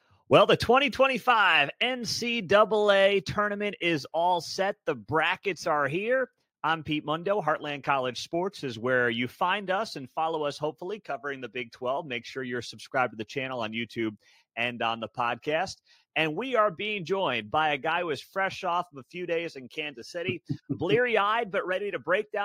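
Sound cut by the noise suppressor, from 0.01 to 0.29 s: right at the start, the suppressor misjudges the opening sound as background noise and pulls it down harder than what follows, by about 13 dB at the deepest point. Roughly a fifth of a second is affected, so the first moment comes through sunken before the level recovers, as if the audio fades in from a held-back start.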